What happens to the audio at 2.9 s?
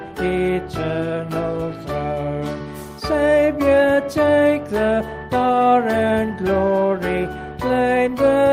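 Nothing goes wrong at 2.9 s; the audio carries on intact through that moment, with no dropout, click or distortion.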